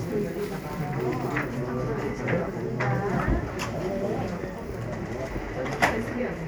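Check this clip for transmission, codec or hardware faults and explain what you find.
I find no faults to report in this clip.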